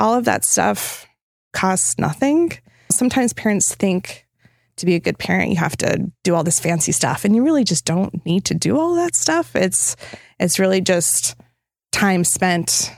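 No technical faults can be heard anywhere in the recording.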